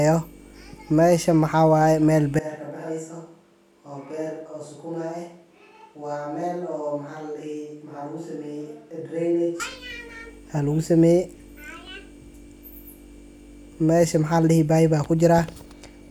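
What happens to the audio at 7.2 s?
At 7.2 s the audio is inside a switch to a distant microphone, from 2.39 s (after "ay meel") to 9.60 s. The close mic has likely dropped out, leaving thin, hollow, roomy sound about 10 dB quieter. The waveform shrinks abruptly, and the spectrogram shows weaker bass and a faint noise floor.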